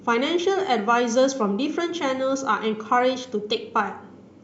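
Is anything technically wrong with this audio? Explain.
No, nothing technically wrong can be heard here.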